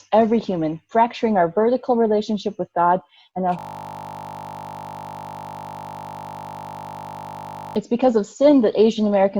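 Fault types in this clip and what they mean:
System hang loop: the system stalled while the audio hardware kept replaying its ring buffer, so a single 20 ms slice repeats about 200 times from 3.59 to 7.76 s, heard as a steady 50 Hz buzz, which points to a buffer of about 20 ms.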